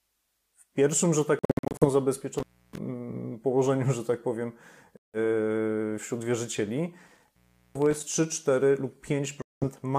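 Bluetooth dropout at 1.39 to 1.85 s: the speech breaks into short silent holes, about 0.30 s lost in total, scattered across roughly 0.43 s, with the longest single gap around 61 ms. Each hole starts and ends abruptly or with a brief fade, and the speech picks up further along rather than where it stopped. This is likely from wireless packets arriving too late for the headphones to play. Similar holes follow at 4.97 to 5.18 s, about 0.17 s lost, and at 9.42 to 9.64 s, about 0.20 s lost.

Intermittent contact at 2.38 to 2.78 s: a loose plug or cable lead briefly breaks the connection, so the speech cuts out with crackle at the start and end of the break. The line stays open for about 0.31 s, leaving faint hiss. A second bout at 7.07 to 8.03 s contains about 0.40 s of open line, again framed by crackle.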